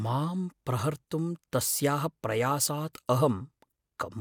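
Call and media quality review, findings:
No audible faults found.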